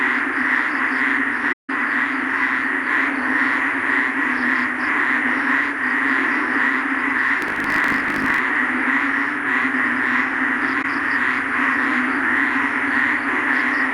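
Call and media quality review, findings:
AAC frame loss with muting, 1.52–1.70 s and 10.82–10.85 s. Soft-faded hole of about 170 ms and brief dip of 21 ms. Decoder zeroed lost frames. Waveform: tapered dropout. Spectrogram: blank column, full band.

Block size mismatch (truncated), 7.40–8.40 s. 50 Hz buzz; sound runs 1.07× fast, timbre unchanged. Block tails discarded between stages, fits 1024-sample writes. Waveform: periodic seams. Spectrogram: 50 Hz harmonic comb.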